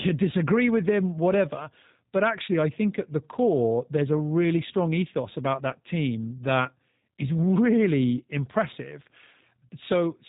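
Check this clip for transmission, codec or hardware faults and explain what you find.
One codec fault runs through the whole recording.

G.729 codec damage, present from start to finish. The speech has been rebuilt from a compact model: a filter standing in for the vocal tract, a pitch predictor, and a few pulses per frame instead of the real waveform, a scheme that fits 8 kbit/s G.729A. Nothing reaches above 3.8 kHz, so sibilants lose their edge, and the plainly audible modelling leaves the speech rough and faintly synthetic.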